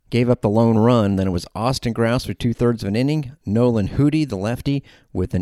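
No technical faults can be heard anywhere in the recording, so there is nothing to describe in time order.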